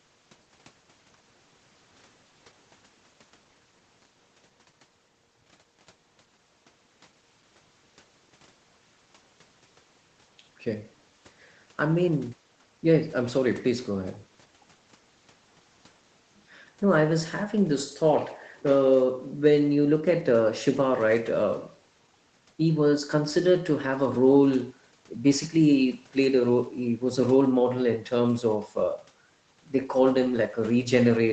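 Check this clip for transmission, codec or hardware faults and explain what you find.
No faults turn up in this clip.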